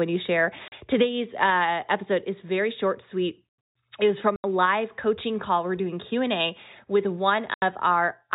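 Packet loss filled with silence: packets went missing and the receiver played dead air in their place, punching hard-edged holes at 0.68–0.72 s after "you share", 4.36–4.44 s between "was from" and "live coaching call we're", and 7.54–7.62 s. The 40 ms and 80 ms gaps fit 20 ms packets, heard through the narrowband G.711 telephone coding.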